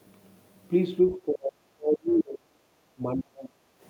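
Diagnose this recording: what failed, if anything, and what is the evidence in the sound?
Call processing failed, with speech suppressed in double talk. From 1.13 to 3.7 s the speech dips and breaks into pieces. It is cut for about two seconds in all, at worst by roughly 40 dB. The likely cause is an echo canceller that treated overlapping talk as echo.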